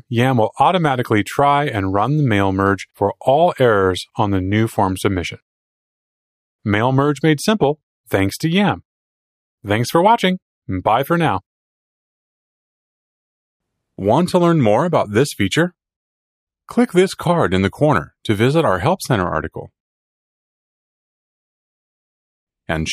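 No technical faults occur at any point in the audio.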